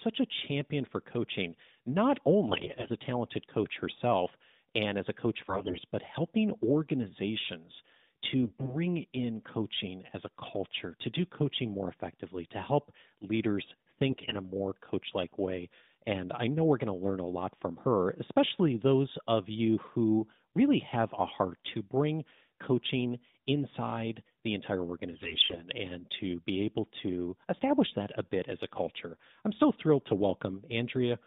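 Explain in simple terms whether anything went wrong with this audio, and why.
Yes, there are AMR bit errors: the mobile-phone speech sounds briefly hoarse and gargly at 2.48–2.91 s (after "champion for coaching not"), 5.48–5.84 s, 8.43–8.77 s (before "in coaching as a"), 14.10–14.34 s and 25.12–25.68 s. A weak radio link flipped a sizeable share of the less protected bits, so the decoder rebuilt the voice from wrong details. Unlike a dropout, the voice never vanishes and keeps its pitch and loudness; it just turns scratchy.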